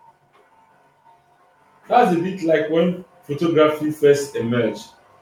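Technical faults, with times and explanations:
1.87–4.8 s, automatic gain rising: the automatic gain control judged the incoming speech too quiet and pushed its gain upward slowly, adding about 5 dB over nearly three seconds. Because the processor raises everything it receives, the voice and the background noise climb together, so the level swells as a gradual ramp rather than a step.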